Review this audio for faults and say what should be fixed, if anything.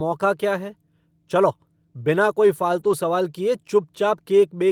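At 2.79 to 2.93 s, between "है चलो बिना कोई" and "सवाल किए", there is a lost packet rebuilt from error correction. About 80 ms of speech turns rougher and noisier, which fits four 20 ms packets replaced by low-bitrate copies from the following packets. Unlike plain concealment, nothing drops out or smears into a repeated buzz; the audio stays continuous, just coarser. To prevent it, reduce packet loss on the network path, for example with a steadier connection or a larger jitter buffer.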